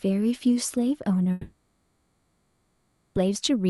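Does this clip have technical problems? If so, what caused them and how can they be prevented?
Yes. From 1.31 s to 3.17 s there is a long network dropout. Almost 1.9 s of sound is gone. The receiver fills the whole gap by stretching the last sound into a buzzy tone that fades toward a low steady noise. Nothing is left fully silent. The audio then resumes, with the missing part never recovered. The likely cause is a run of lost or late packets on the network. The call codec's band, which tops out near 12 kHz, is audible around this. To prevent it, use a more stable connection and enable forward error correction or redundancy so short losses can be rebuilt.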